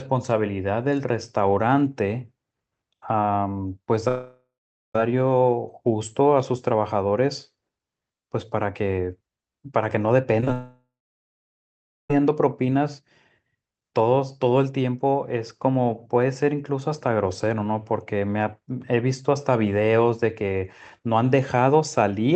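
At 4.08 to 4.95 s the audio cuts out for about 0.87 s, most likely a long network dropout. The receiver stretches the last sound into a fading buzz, and for roughly the final half of the gap only near-silence remains before the speech resumes with that stretch missing. On a spectrogram the last frame's harmonics smear flat and fade into a blank band. The waveform shows a decaying envelope, then a flat line.

Three short concealed packet losses follow in quick succession: 10.40 to 10.43 s, then 10.45 s and 10.48 s. Each drops about 10 ms of audio, and the decoder patches the hole by extending the preceding sound before crossfading back. The result is a quick wobbly smear rather than a gap. A spectrogram shows brief blurred patches where the fine detail goes steady, and the waveform has small kinks at each seam.

Right after, from 10.53 to 12.10 s, comes a second long network dropout of about 1.57 s, again likely the cause. 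The concealment fades out quickly and leaves about 1.2 s of silence or low steady noise before the audio returns without the lost section. The waveform goes flat for most of that span.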